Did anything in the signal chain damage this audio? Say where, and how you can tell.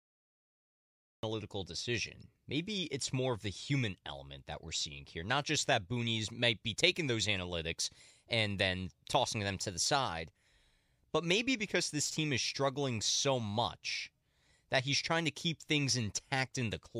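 Yes: digital silence until 1.23 s, then speech bursts in mid-sound with no attack. This cut-off start means capture or the stream began late, at the storage or recording stage.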